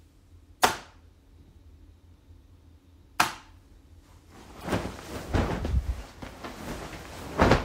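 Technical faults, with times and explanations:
4.60 to 4.64 s, damaged data in the compressed stream: a short glitch where corrupted bytes threw the decoder off, and it lost sync until it found the next frame.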